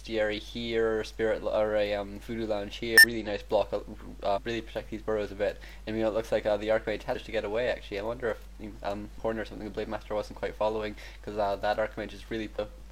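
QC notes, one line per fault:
2.98–3.04, 4.32–4.38, 7.11–7.16, 9.15–9.21 and 12.54–12.59 s: damaged data in a compressed stream. Each 50–70 ms burst is where the decoder misreads corrupt frames and resyncs.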